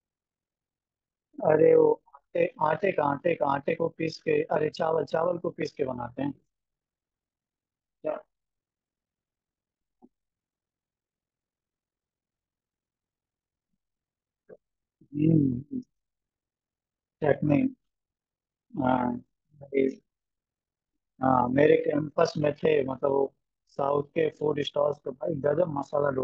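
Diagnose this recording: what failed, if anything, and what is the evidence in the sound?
The failure is overlap-add ripple in frame-based processing, present throughout the speech. The level dips and recovers around 40 times a second, by about 11 dB. The analysis windows overlap unevenly, so frame joins do not sum flat. This gives a rough flutter.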